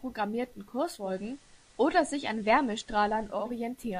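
From 0.85 s to 3.57 s comes digital radio blending to analogue: the receiver lost its digital stream and cross-faded over 369 ms to FM. The spectrogram shows a faint hiss floor. The waveform level steps about 2 dB.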